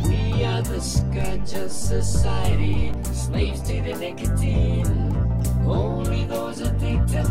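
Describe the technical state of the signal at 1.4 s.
A DC step is in effect at 1.4 s, spanning 1.21 to 2.94 s: the waveform's zero line jumps by about -22 dBFS. The jump is heard as a low thump or click at its onset while the sound continues unchanged.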